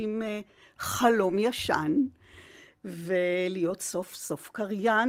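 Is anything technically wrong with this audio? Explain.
No, nothing's wrong with this speech clip; it has simply been through Opus voice compression at around 24 kbps in its hybrid fullband mode, which leaves only a light touch of coding texture that is normal for that setting.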